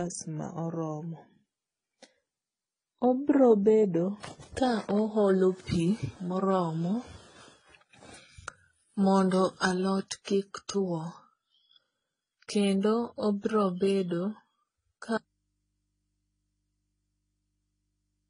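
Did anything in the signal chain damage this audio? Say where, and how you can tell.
Yes. At the codec stage, the whole clip stops sharply at 10 kHz and shows smeared, warbly detail from stacked lossy artefacts. That is likely transcoding between lossy codecs, consistent with a low-rate HE-AAC source re-encoded through AAC and then MP3. A spectrogram shows a flat ceiling with patchy, blocky high bands.

From 15.18 s to the end, the speech cuts off abruptly and only mains hum remains, around 50 dB below the signal. This audio dropout to a faint residue likely came from the input or wiring losing the source while the path stayed live. On the waveform the level collapses at once to a thin hum line.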